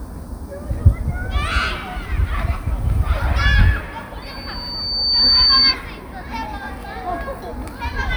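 At 4.22 s a microphone begins picking up the loudspeaker it feeds, closing a loop whose gain exceeds one at 4.6 kHz. A pure tone swells over about a second into a piercing squeal, roughly 10 dB above the sound, before loudspeaker feedback stops at 5.75 s.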